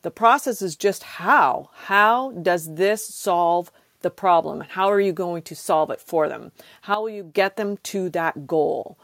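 Speech whose level, background noise included, drops abruptly by about 11 dB at 6.94 s and stays down until 7.34 s, with no fade in or out. This is a sudden gain jump, likely from a digital gain setting applied without a ramp.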